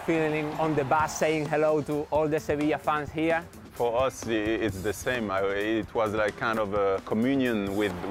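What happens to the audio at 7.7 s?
Nothing goes wrong at 7.7 s; the sound there plays through cleanly, with no dropout, click, distortion or other fault.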